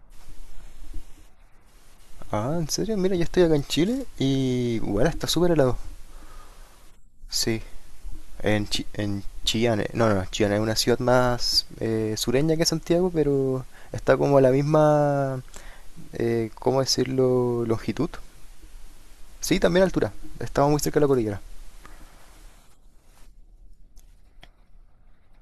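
Speech recording, with no audible technical faults anywhere.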